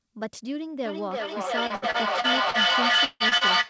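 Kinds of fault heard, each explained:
Feedback echo between two devices: From 0.86 s to the end, the speech returns roughly every 0.3 s, each pass thinner and more ringing, and the pile-up reaches about 9 dB above the direct speech. A second device is replaying this microphone's sound into it, and the echo canceller cannot remove another device's playback.
Repeated packet loss (robotic sound): Between 1.67 and 2.57 s, five gaps totalling 180 ms, the longest 61 ms, are each filled by extending the preceding sound. About a fifth of this stretch is patched in, giving choppy speech with pieces missing.
Long network dropout: From 3.05 to 3.23 s, about 150 ms of speech is replaced by a fading continuation of the last sound, then about 20 ms of near-silence before speech resumes without the lost part. The likely cause is a network outage in which no packets arrived.
Short concealed packet loss: At 3.29 to 3.34 s and 3.37 to 3.44 s, about 30 ms of speech fails to arrive each time. 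The receiver bridges each hole by continuing the previous sound and blending back in, heard as brief smears or wobbles.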